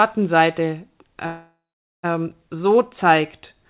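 Speech over a narrowband call line, with nothing above 4 kHz. A call audio freeze runs from 1.26 to 2.05 s. The last sound stretches into a fading buzz or hiss, then about 460 ms of silence. Speech resumes where it stopped, now 772 ms late. The likely cause is delayed packets draining the jitter buffer.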